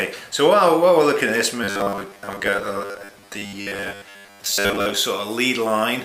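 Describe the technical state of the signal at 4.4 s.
At 4.4 s the sound is inside a stretch of robotic sound from repeated short buffers (1.64 to 4.96 s): a rigid, metallic buzz locked at 100 Hz, likely from a roughly 10 ms buffer being replayed most of the time. That fixed pitch sets it apart from codec warble.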